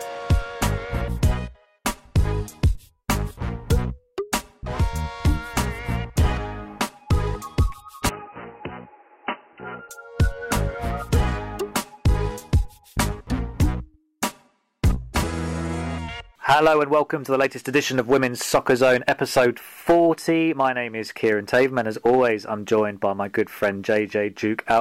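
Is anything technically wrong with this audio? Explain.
Yes. From 8.09 to 9.89 s the sound suddenly goes dull and boxy, drops a little in level and picks up faint new background noise, with nothing above 3 kHz. That's likely the input switched to a poorer device, a narrower-band mic with its own noise, before it clears again. There's no gap at either switch.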